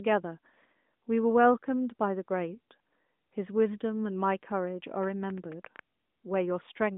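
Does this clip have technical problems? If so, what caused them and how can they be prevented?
Yes. A train of clicks runs from 5.03 to 5.80 s: about seven irregular pops, roughly eight per second, peaking about 5 dB above the speech, likely from interference or a faulty connection or power supply. Moving equipment away from nearby electronics and using a stable, properly powered interface would prevent it.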